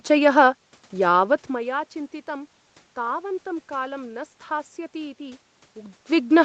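No technical faults can be heard in this speech recording.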